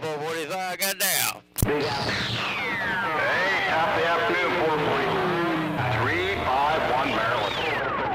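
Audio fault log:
0.82–7.79 s, pre-emphasis left on: the treble boost was never undone by a matching de-emphasis, so the top end sits about 14 dB hot at 10 kHz relative to 1 kHz. That fits a 75-microsecond FM curve, and everything comes across thin, bright and hissy on sibilants.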